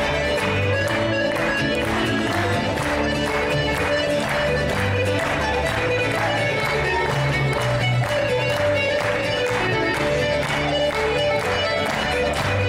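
Nothing in the audio stood out as a technical problem on listening.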